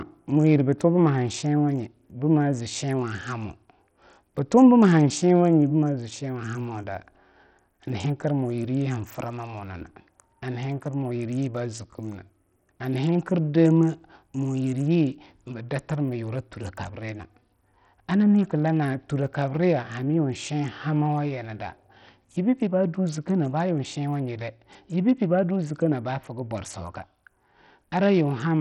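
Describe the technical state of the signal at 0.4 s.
At 0.4 s the speech is passing through what is likely Bluetooth SBC compression, present across the whole clip. Its coarse sub-band quantisation starves the upper bands, so treble flickers with gritty noise and aliasing, nothing sounds above 16.9 kHz, and the heavy damage points to a bitrate near 64 kbps.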